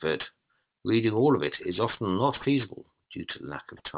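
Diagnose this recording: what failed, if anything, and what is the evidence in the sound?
The failure is aliasing at a sample-rate conversion stage: the audio was downsampled without an anti-aliasing filter, which fits a drop from 48 kHz to 8 kHz. Throughout the speech, energy above 4 kHz folds back beneath it, leaving gritty, metallic sibilants and alias tones roughly 15 dB under the signal.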